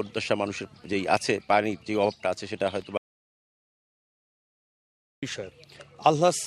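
The audio has an audio dropout to silence from 2.97 to 5.23 s, about 2.25 s lost, likely from the input disconnecting or muting while recording continued. Unlike a noise gate or fade, the sound cuts abruptly to silence, with no room tone remaining.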